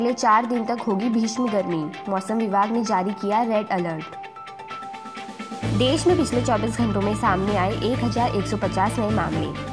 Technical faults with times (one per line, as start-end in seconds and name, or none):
none